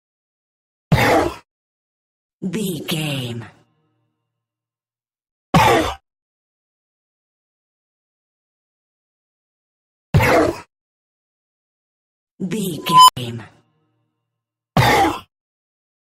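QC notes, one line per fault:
5.95–7.44 s, repeated packet loss (robotic sound): over this 1.5 s stretch the audio breaks into a rapid string of around seventeen holes, the longest about 88 ms. Each hole is bridged by stretching out the sound just before it, so about 42% of the span is patched rather than real, giving a choppy, robotic texture. Unlike a single dropout or a clean mute, the gaps recur in quick succession and are papered over, not left silent.
12.86–13.17 s, unstable filter: a tone of around 1 kHz appears from nothing and swells to a very loud, clipped squeal within about 0.22 s. The audio then cuts to silence for roughly 87 ms. This happens because a recursive filter's output runs away until its values overflow and it resets. It differs from acoustic feedback howl, which builds more gradually and fades or is pulled down rather than dropping abruptly into a short dead gap.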